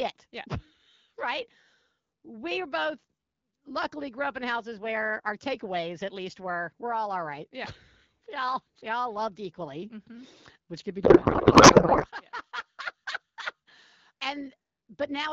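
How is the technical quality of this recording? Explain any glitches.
The speech runs over AMR wideband (HD Voice) at what sounds like 12.65 kbit/s, clear with light coding damage, but it breaks up once.

From 11.03 to 12.06 s there is a codec payload misread. The decoder appears to be treating octet-aligned AMR frames as bandwidth-efficient, so every field lands shifted. The speech turns into garbled noise and warble that barely tracks it, until the framing lines up again.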